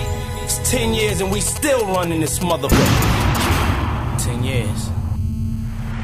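From 1.0 to 3.46 s a galloping dit-dit-dit of short raspy buzzes cuts in, fairly loud at roughly 10 dB below the sound. These are GSM signalling bursts: a nearby 2G phone sending brief groups of radio pulses at 217 Hz, which the audio circuit rectifies.

At 3.53 s it settles into a continuous hard, raspy buzz at 217 Hz, rich in harmonics and about 22 dB below the sound, lasting to 5.92 s. This GSM phone buzz comes from the phone transmitting steadily during a call, its pulses again rectified into the audio.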